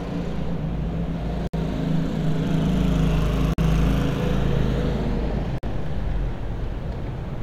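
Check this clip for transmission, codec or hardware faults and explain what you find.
There's one problem, repeated three times: a gap at a join of encoded pieces. The sound drops out at 1.47–1.54 s (about 62 ms), 3.54–3.58 s (48 ms) and 5.58–5.63 s (48 ms), every 2 s. It looks like 2-second chunks were encoded separately and butted together untrimmed, so each join keeps the encoder's start-up delay and the end padding as silence. You hear short, slightly smeared holes, then the sound resumes where it stopped.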